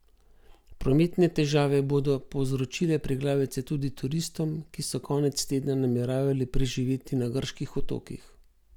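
Listening to the speech in this recording, nothing technical stood out.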